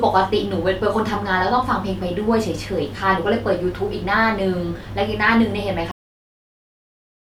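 At 5.91 s the speech stops abruptly, mid-sound, and drops straight into dead digital silence that lasts the remaining 1.4 s or so. There is no decay or trailing room tone, just an instant void. This is a cut-off end: the final stretch of audio was never written out or played back, so the stream ends wherever the last buffer that made it through happened to stop, rather than at a natural pause.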